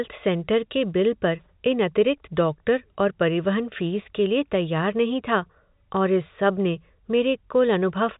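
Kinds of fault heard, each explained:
No kinds of fault are heard in this speech clip.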